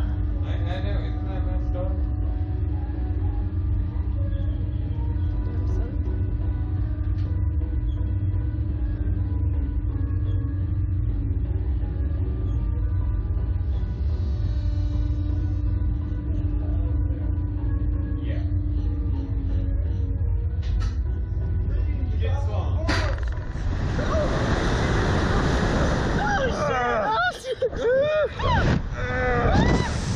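No technical faults can be heard anywhere in the recording, and the signal holds steady throughout.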